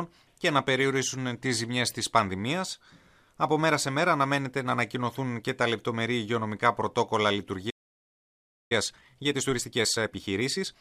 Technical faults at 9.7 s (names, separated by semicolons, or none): time-compressed catch-up